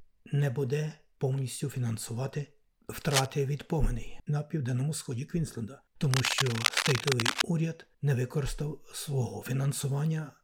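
Two bursts of cable scratch noise break into the audio, a short one from 3.11 to 3.26 s and a longer one from 6.11 to 7.43 s. Each is a dense, irregular crackle and rustle sitting roughly as loud as the wanted sound. The likely cause is a worn cable, connector or control being moved, so that its contact resistance fluctuates rapidly and injects uneven noise into the signal path for as long as the movement lasts.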